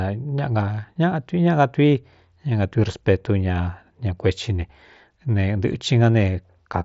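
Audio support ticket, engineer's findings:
Findings: no fault found; the speech comes over the Bluetooth mSBC headset codec as expected, band-limited to about 7.7 kHz.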